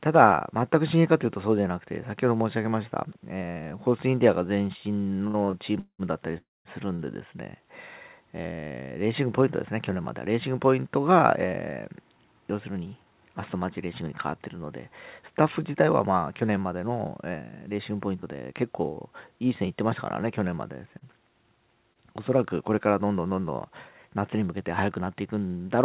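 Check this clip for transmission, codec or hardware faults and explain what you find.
Yes, there are four, all from the network side of a call. Everything sits under 4 kHz, which fits a narrowband G.711 call path.

Between 5.27 and 7.02 s you get repeated stalls (stutter). The jitter buffer ran dry five times, and each time the receiver kept stretching the last bit of sound until packets caught up. That adds up to about a third of a second of filled-in audio, with the longest hold at 191 ms. Nothing is lost, but the audio drags and hiccups through that stretch.

Inside that run, from 6.38 to 6.68 s, there's a call audio freeze. The sound holds briefly, then fades to near silence for roughly 210 ms before carrying on right where it left off. It's likely caused by packets being held up in transit long enough that the buffer had nothing to play, so the receiver bridged the wait with concealment. 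That added a 272 ms pause to the audio.

From 11.45 s to 25.01 s there's a jitter buffer speed-up. The buffer had built up more audio than it wanted, so the receiver kept snipping out tiny pitch-period-sized chunks to cut the delay. Over that stretch it removes about half a second, so playback runs at 104% speed with the pitch unchanged. That stays just under the speed where it would start to sound hurried, and it never turns chipmunky.

Between 18.22 and 21.98 s there are scattered short gaps. A few individual packets went missing, 90 ms of audio in total, and the receiver patched each hole by extending the sound just before it. None of the patches is longer than about 30 ms, so the audio stays clear apart from a few quick ticks or smeared little blips.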